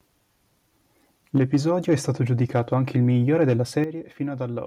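A speech clip with harsh, crackling tops on its loudest syllables at 1.35–1.57 s, 1.91–1.94 s, 2.41–2.96 s just before "il migliore", and 3.41–3.53 s just after it. The peaks are flattened by about 1 to 4 dB, likely from microphone overload, with input gain set too high for the converter. The distortion rides only on the peaks and leaves the overall level unchanged. At 1.38 s and 3.84 s, voice and background together drop cleanly by about 4 dB and then about 9 dB. This is likely the microphone volume being stepped down by the call software reacting to the overloads. It is a sudden level shift without any added crackle, which sets it apart from the clipping.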